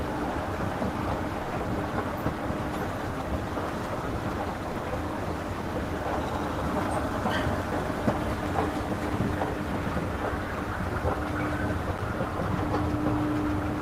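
At 1.43 to 1.51 s, and again at 4.71 to 4.75 s, the sound gives way for 80 ms and then 40 ms to steady, featureless noise, likely sound dropped by the voice detector, with comfort noise filling the gap. Unlike a packet loss, nothing clicks or smears; the audio simply yields to smooth noise and returns cleanly.

From 11.97 to 12.02 s, about 50 ms of irregular, scratchy crackle is loose connector crackle: a contact rapidly making and breaking chops the signal. Its uneven, gritty texture sets it apart from a single digital click.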